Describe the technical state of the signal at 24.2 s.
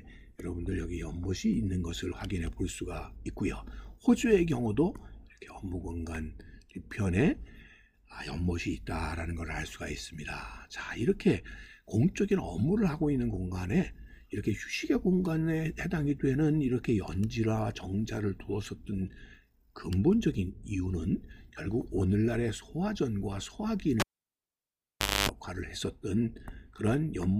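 At 24.2 s the signal's gone: a cable pulled and plugged in, running from 24.00 to 25.29 s. It pops out to near silence for about 1.24 s, including 260 ms of 50 Hz mains buzz while just the tip touches, and a second pop on reconnection.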